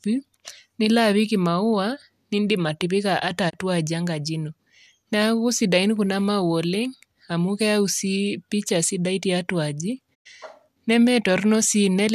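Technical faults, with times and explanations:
3.49–3.55 s and 10.13–10.27 s: digital broadcast dropout. The receiver muted after losing frames, roughly one then four. Audio quickly fades over 20 ms to silent gaps, which show as blank vertical bands on a spectrogram.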